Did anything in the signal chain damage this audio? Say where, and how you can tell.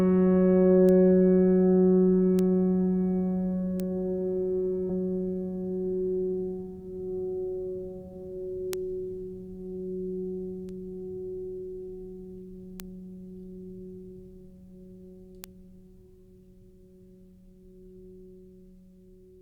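Yes. The music shows two kinds of damage, one from the digital transport or storage path and one from the network path.

The bit error spikes come from single bits flipping in memory or on a digital link, each corrupting a sample or a few in a row. The sample value leaps by a power of two and snaps back, so each one is heard as a lone sharp tick, broadband and unrelated to the music. They fall at 0.89, 2.39, 3.80, 8.73, 10.69, 12.80 and 15.44 s. Their isolated, click-like character with no change to the surrounding audio is what identifies them as bit errors rather than dropouts.

The skip ahead happens at 4.89 s. At that point a stretch of queued audio was dropped, most likely by the jitter buffer when it overflowed while later packets were already waiting. About 0.7 s of the music is missing. Nothing fills the hole: the material before and after the jump is spliced almost directly, so the passage lurches forward abruptly instead of pausing or going silent, and the playback delay shrinks by that same amount.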